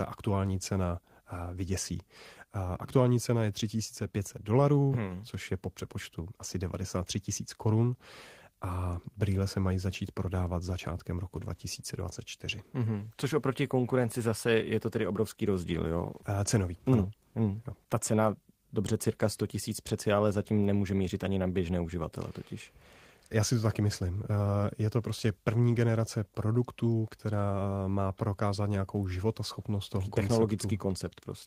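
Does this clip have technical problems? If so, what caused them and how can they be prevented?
No, no technical faults present.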